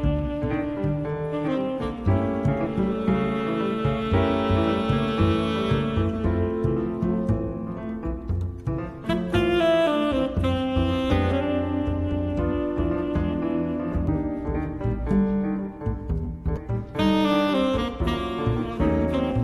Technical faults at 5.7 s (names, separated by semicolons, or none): none